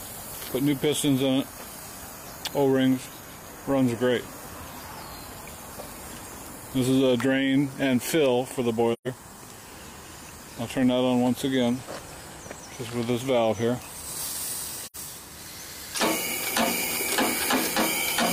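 AAC frame loss with muting occurs at 8.93 to 9.07 s and again at 14.83 to 14.96 s. Blocks of coded audio went missing and the decoder filled them with silence. The overlapping transform windows taper the sound down into each gap and back up afterwards, so each dropout is a soft-edged hole. The first lasts about 128 ms, which fits three lost frames. The second lasts about 85 ms, consistent with two.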